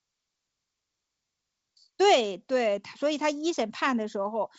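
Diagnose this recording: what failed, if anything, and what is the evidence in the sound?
Nothing has failed: the speech comes through an ordinary G.722 wideband telephone coding path at 64 kbit/s, with the band extending to about 7 kHz and at most a faint trace of the coding in the upper band.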